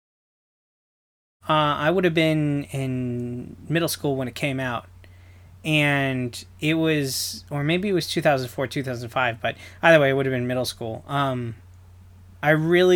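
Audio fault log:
No faults found; the speech opens with a smooth fade-in ending around 1.5 s.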